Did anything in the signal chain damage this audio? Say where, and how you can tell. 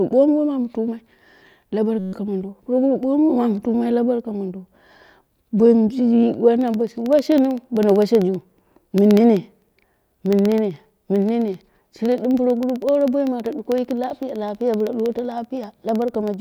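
Yes. At the driver or buffer stage, a system hang loop froze the host from 1.99 to 2.13 s, just before "mondo puroguru", while the hardware replayed one 5.33 ms slice 26 times, which fits a 256-sample buffer. The result is a steady 188 Hz buzz.

Periodic USB or driver dropouts follow from 6.61 s to 16.34 s. A recurring background task stalls the bus every 64 ms, and each stall leaves a gap of silence of about a tenth of a millisecond. About 150 evenly spaced ticks result, audible wherever the speech carries signal.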